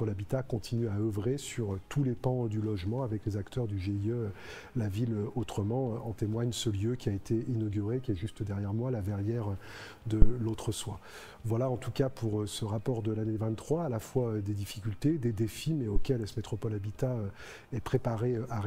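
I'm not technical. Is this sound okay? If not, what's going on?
No. There are two deep thumps, at 10.22 s and 15.96 s. This is a phantom power thump: a microphone's power switching mid-recording. The first is louder.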